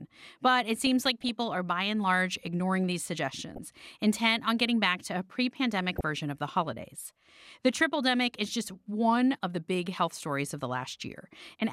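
Weak DAB reception lets bit errors slip past error correction into the MP2 data. Corrupted samples put short noise blips in single sub-bands, and corrupted scale factors make sub-bands jump in level. The result is DAB burbling over the speech at 0.87–1.29 s before "are by and large", at 3.49–3.58 s after "and large ignoring these", and at 5.78–6.01 s after "back to a pre".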